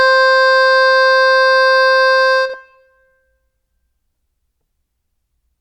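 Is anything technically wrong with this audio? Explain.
Yes. Frames out of order at 2.46 to 2.55 s: two adjacent blocks of the music, each about 40 ms long (which fits runs of two frames apiece), were decoded in swapped order, so the later block plays before the earlier one. That stretch comes out as a brief garbled flutter. Nothing is missing, and the music after the swap stays in time.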